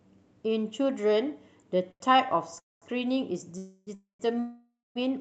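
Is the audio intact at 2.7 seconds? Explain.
No. A call audio freeze runs from 2.59 to 2.85 s, likely from delayed packets draining the jitter buffer. A brief fading buzz gives way to 200 ms of silence, a decaying tail then a flat line on the waveform and a blank spectrogram. Speech resumes 225 ms late, with nothing lost.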